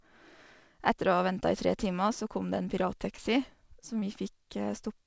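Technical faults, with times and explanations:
3.16 to 3.20 s and 4.00 to 4.04 s, short concealed packet loss: Right after "kom det en", and again near 4.0 s, about 20 ms of the call arrived too late to decode. The receiver filled each gap by extending the preceding sound, about 18 ms and 19 ms, then blended back into the real signal. Each one comes across as a brief smear or wobble. The patch sits in the G.722 call audio, which carries nothing above 8 kHz.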